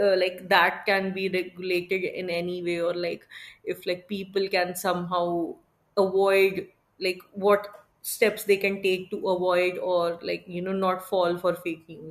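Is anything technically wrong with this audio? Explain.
No, nothing is technically wrong with this audio.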